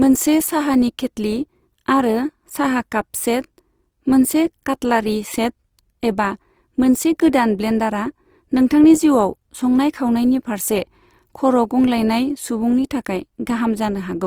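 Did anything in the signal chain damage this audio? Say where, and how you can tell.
Yes: Opus compression throughout, at the codec stage. The speech sounds grainy and rough, not swirly, yet reaches 20.4 kHz, fitting a likely CELT-mode encode around 24 kbps.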